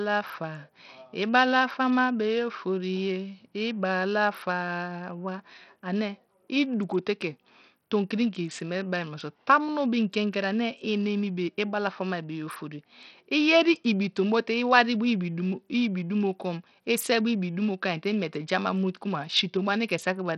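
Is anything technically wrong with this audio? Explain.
Yes. Throughout the speech there is heavy coding damage, likely from Bluetooth SBC compression at a bitrate that sounds near 64 kbps. Nothing survives above 17.3 kHz, and with so few bits the upper sub-bands are starved and coarsely quantised, so the treble flickers and a gritty, aliased noise rides on the sound.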